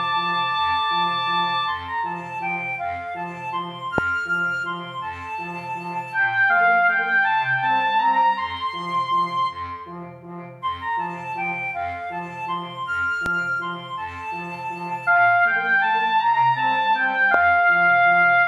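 Three loud pops land on top of the sound, at 3.98 to 4.00 s, 13.26 to 13.28 s and 17.34 to 17.36 s, each a single sharp hit. The first jumps roughly 20 dB above the signal, the later two somewhat less. These are likely voltage spikes from a switch, plug or static.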